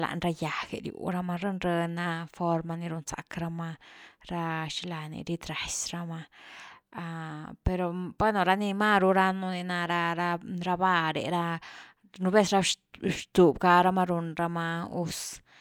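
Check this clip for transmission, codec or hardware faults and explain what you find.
No fault found; nothing audible in the speech traces back to the signal path.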